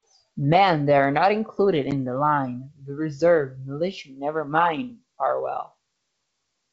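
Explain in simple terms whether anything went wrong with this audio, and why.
One short glitch at about 1.91 to 1.93 s: packet loss on an ADPCM call. Roughly one packet, about 10 ms of speech, dropped out as a hard-edged hole. The decoder briefly lost track of the sender, so the speech came back slightly distorted before settling.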